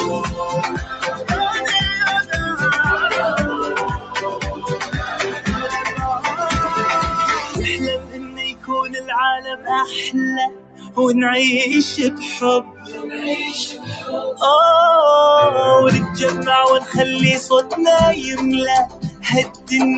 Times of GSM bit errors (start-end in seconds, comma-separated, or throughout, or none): none